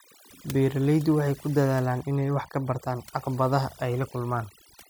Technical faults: overdone noise removal

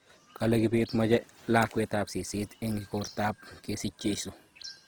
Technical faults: Opus compression

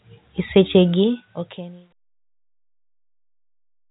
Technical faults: none

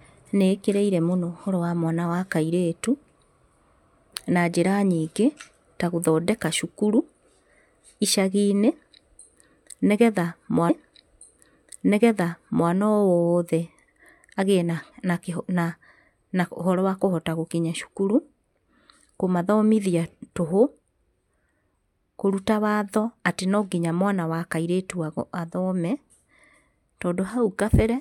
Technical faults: stream segment repeated

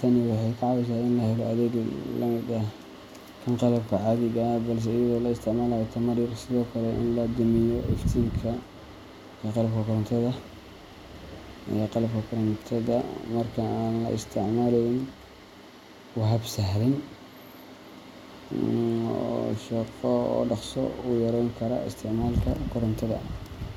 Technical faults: none

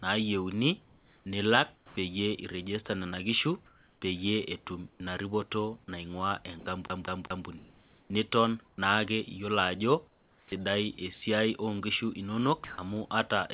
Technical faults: sound chopped by the voice detector; sound dropped by the voice detector; CD stuck on one turn; comfort noise in place of the background

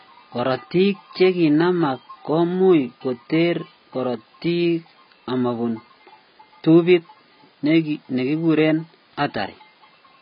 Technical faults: AAC compression

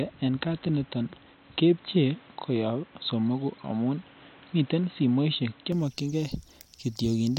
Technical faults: input switched to a poorer device

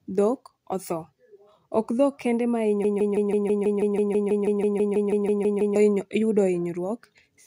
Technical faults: broken-record loop

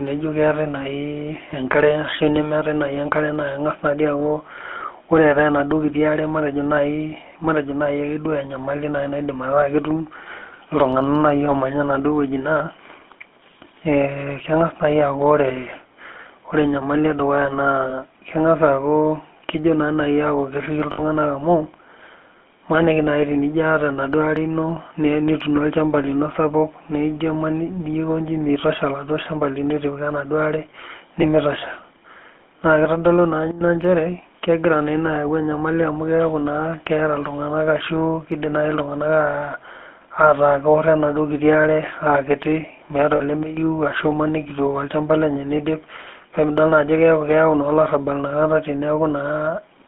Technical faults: GSM full-rate codec; lost GSM frames; sudden gain jump

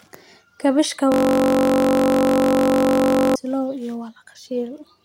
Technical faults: system hang loop

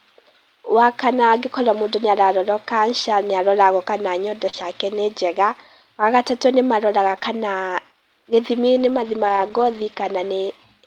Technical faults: short concealed packet loss; lost packet rebuilt from error correction

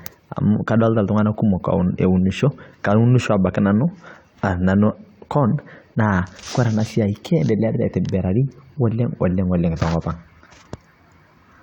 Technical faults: none

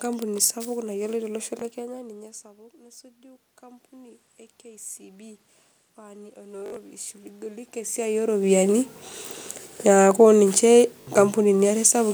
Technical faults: Bluetooth stutter; automatic gain rising; automatic gain falling

